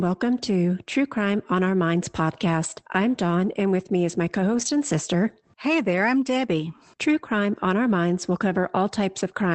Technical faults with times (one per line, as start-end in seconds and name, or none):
2.63-2.65 lost packet rebuilt from error correction
4.53-4.67 lost packet rebuilt from error correction